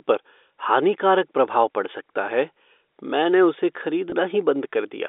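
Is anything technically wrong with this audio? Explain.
Yes. At about 4.1 s, just after "सकता है मैंने उसे", there is packet loss with pitch repetition. About 20 ms of speech went missing, which fits one lost packet. The receiver filled the gap by repeating the last pitch period. It sounds like a brief, slightly buzzy hold. The line itself is G.711 telephone coding, limited to roughly 300 Hz to 3.6 kHz.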